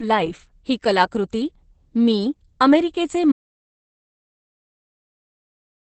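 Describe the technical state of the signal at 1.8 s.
At 1.8 s the speech carries Opus voice compression, present across the whole clip. Nothing sounds above 8.5 kHz, and the coarsely coded excitation gives a muffled, hoarse, slightly robotic quality. This points to the SILK predictive coder running near 10 kbps.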